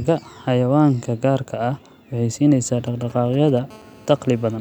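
From 2.86 to 3.59 s, GSM signalling bursts break in: a nearby 2G phone exchanging short radio bursts with the network, rectified by the audio circuit. Unlike a continuous buzz, it gallops in dit-dit-dit clusters of brief 217 Hz rasps, roughly 20 dB under the speech.

From 3.70 to 4.56 s comes GSM phone buzz, a nearby phone now in a call and transmitting steadily at 217 bursts per second. What separates it from the signalling bursts is continuity: an unbroken, harsh, harmonic-rich 217 Hz drone, about 29 dB below the speech and unrelated to it.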